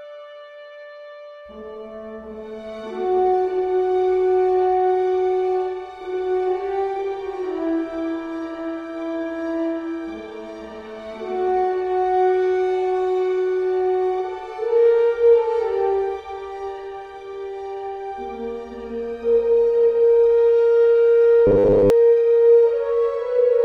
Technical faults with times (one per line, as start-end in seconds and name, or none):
21.47-21.90 robotic sound from repeated short buffers